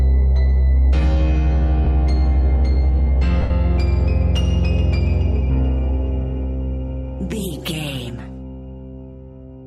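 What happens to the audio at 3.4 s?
Lost LE Audio frames at 3.42 to 3.50 s: for about 82 ms the LC3 decoder repeats the last spectrum with random signs, so the sound smears into noise and fades.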